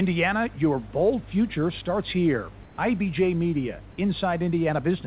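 A speech recording carried over a call, with nothing above 4 kHz, which fits a narrowband G.711 path, and two faults. Mains hum runs throughout as a steady 50 Hz tone, roughly 20 dB below the speech. It is a clean low pitch at the mains frequency rather than a rasping buzz full of upper harmonics, and it never changes with the talking, which points to a ground loop or nearby transformer coupling power into the signal. Right after "bold future starts here", from 2.63 to 2.78 s, about 150 ms of the room's background becomes comfort noise in place of the background. It is a smooth, featureless hiss about 2 dB quieter than the real room sound. Unlike a dropout or a noise gate, the gap does not fall to silence. It is filled with synthetic noise, likely generated by the receiver while the sender's voice detection paused transmission.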